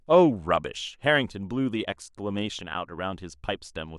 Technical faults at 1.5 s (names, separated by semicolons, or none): none